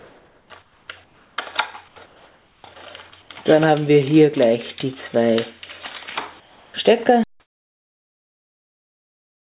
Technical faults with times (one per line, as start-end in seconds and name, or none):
0.00-1.38 comfort noise in place of the background
1.88-2.64 comfort noise in place of the background
3.22-3.30 comfort noise in place of the background
6.40-6.74 comfort noise in place of the background
7.24-9.46 audio dropout to silence